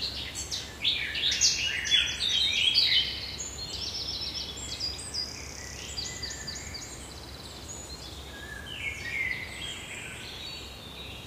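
Sounds make up the clip, and nothing technically wrong can be heard in it. No fault stands out at any point, so there is nothing here to time or trace to a cause.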